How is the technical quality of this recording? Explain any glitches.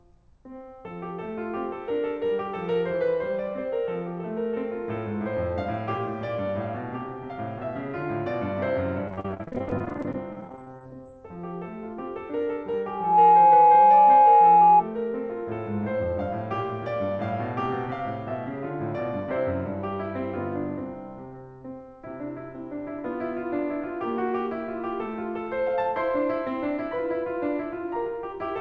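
The music has two clear glitches, heard through a call-type path with nothing above 8 kHz.

From 9.08 to 11.07 s the music turns choppy and robotic. This is repeated packet loss: dozens of holes up to 40 ms each are patched by stretching the preceding sound, covering about 28% of that stretch.

From 12.86 to 14.84 s a loudspeaker feedback squeal swells within a fraction of a second into a steady 837 Hz tone about 15 dB above the music. A microphone is re-amplifying its own loudspeaker at that frequency.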